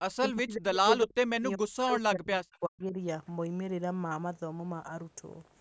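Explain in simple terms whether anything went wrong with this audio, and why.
The speech keeps ducking almost to silence from 0.17 to 0.84 s and 1.03 to 2.97 s, likely speech suppressed in double talk: the call's echo canceller turned down this side's voice along with the loudspeaker echo. A faint repeat about 0.39 s behind the speech, at 2.52 to 2.58 s, is likely echo leak, a delayed copy rather than simple reverberation.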